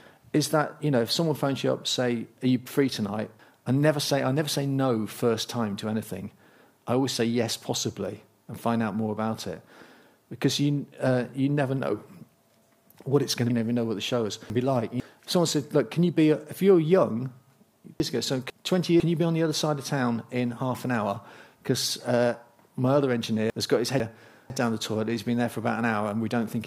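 From 13.5 to 15.0 s the chunks play out of order. A half-second block arrived late and plays after the two blocks that should follow it. Nothing is missing, but the sound jumps around, with three hard joins. The same fault returns at 18.0 to 19.0 s and at 23.5 to 24.5 s. Each time one 500 ms block is swapped with its neighbour, giving a shorter jumbled moment.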